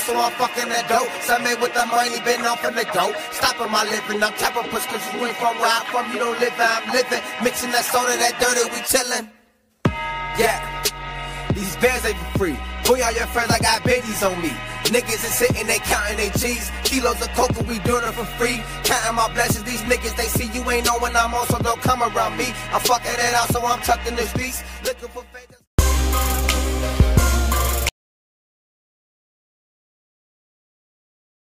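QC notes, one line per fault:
27.89 s to end: audio dropout to silence. The input was likely lost and silence was written, so the sound cuts off mid-flow into total silence, with no room tone.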